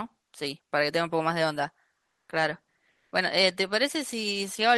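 At 2.05 to 2.29 s and again at 2.91 to 3.11 s, comfort noise replaces the background: the real room sound drops out for a flat, featureless hiss, about 3 dB louder the first time and about 2 dB quieter the second, likely Opus discontinuous transmission filling gaps in speech.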